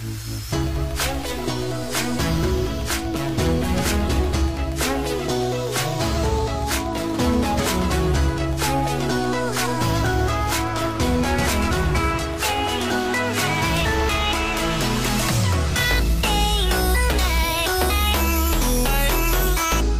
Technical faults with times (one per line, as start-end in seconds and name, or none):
none